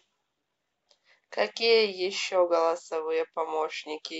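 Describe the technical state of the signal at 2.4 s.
At 2.4 s the speech signal runs intact, with no dropout, distortion or other audible fault at that moment.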